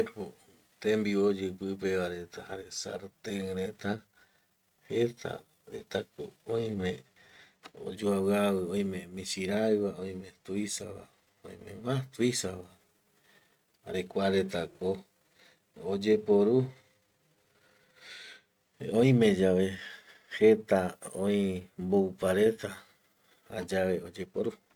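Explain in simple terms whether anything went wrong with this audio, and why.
Nothing went wrong with this speech recording that a listener can pick out. Listening closely at every moment turns up nothing out of place.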